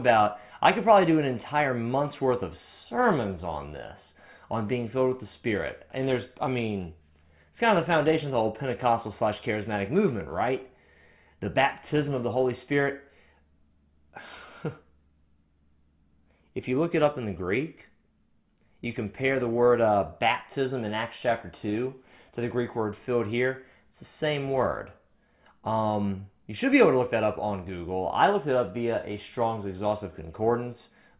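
No technical faults are audible.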